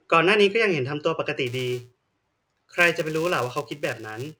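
A filter restarted on every block affects the speech from 1.47 s to the end of the clip. Some filter in the chain discards its internal state at each block boundary and begins again from silence, so every block opens with a small transient. Those repeated clicks fuse into a buzz at about 375 Hz, which fits a 128-sample block, and the buzz rises and falls with the level of the speech.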